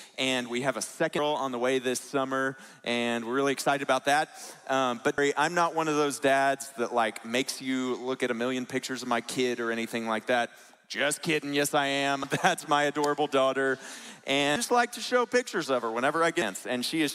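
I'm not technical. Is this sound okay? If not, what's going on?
No. There is damaged data in a compressed stream: short chirps or blips at 1.19, 5.18, 12.24, 14.56 and 16.42 seconds, where the player hits corrupted chunks, briefly loses its place, and resumes.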